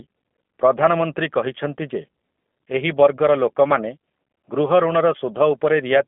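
From start to finish the speech sounds narrow, slightly rough and synthetic, with nothing above about 3.5 kHz and thin lows below 200 Hz. That points to the G.729 codec at about 8 kbit/s, rebuilding each frame from a vocal filter, pitch predictor and a few pulses.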